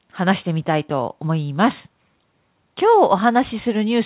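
No technical faults are audible.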